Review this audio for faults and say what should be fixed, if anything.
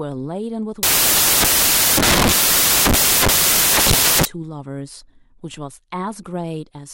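From 0.83 to 4.25 s the reader assembles samples from the wrong bytes, misaligned or in swapped order, so the rapidly changing low bits land in the most significant position. The speech turns into loud, harsh broadband noise, close to white on the louder sounds. Confirm byte order and sample alignment against the stream header before decoding.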